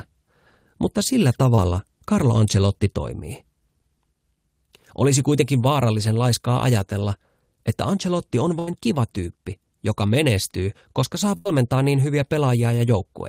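At 1.55–1.59 s, right after "mutta sillä", a short concealed packet loss leaves about 20 ms of speech undelivered. The decoder bridges it with roughly 17 ms of extended sound before rejoining, so it registers as a brief smear.

A burst of packet loss at 8.59–8.69 s, just before "kiva tyyppi joka menestyy", and another at 11.37–11.47 s, between "joka menestyy koska saa" and "niin hyviä", each lose about 80 ms. The receiver stretches the last sound and lets it fade, and then speech resumes with that stretch gone. Unlike the short dropout, these are long enough to hear as a held, dying sound followed by a skip.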